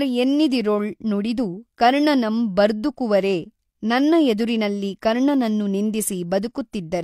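Nothing technical goes wrong anywhere in this bit of speech, so there's no fault to point to at any moment.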